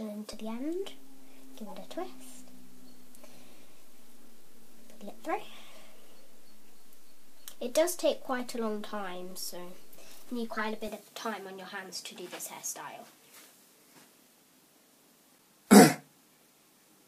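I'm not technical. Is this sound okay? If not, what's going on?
No, there are two kinds of problem in it.

The first is a DC step. At 0.33 s the baseline the whole waveform sits on suddenly jumps and stays shifted until about 10.88 s. The jump gives a low thump, like something bumping the mic, while the sound itself carries on as normal. It's a bit like the floor under the audio being raised.

The second is a corrupt frame decoded, which happens twice. Tiny chunks of the compressed audio got scrambled, and the player played them anyway instead of skipping them, so you hear a brief, odd chirp or blip. The first one, from 1.67 to 1.71 s, covers a couple of chunks and is fairly faint. The second, from 10.54 to 10.59 s, is a single chunk but noticeably louder, shortly before the shifted stretch ends.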